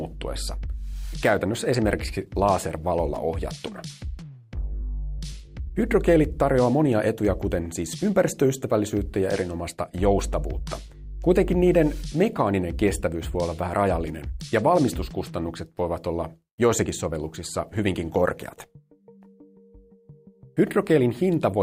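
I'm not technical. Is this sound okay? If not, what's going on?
No. There is clock drift between sender and receiver: the sending device's clock runs about 4 percent fast, so audio arrives slightly quicker than it can be played. Repeated timing corrections follow from 0.01 to 21.60 s, as the receiver trims small pieces to keep up, at 104 percent speed, heard as faint, uneven hiccups.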